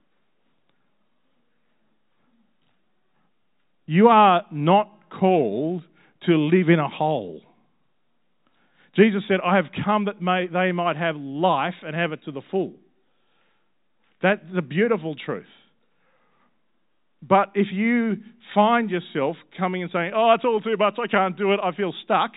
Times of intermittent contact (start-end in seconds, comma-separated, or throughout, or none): none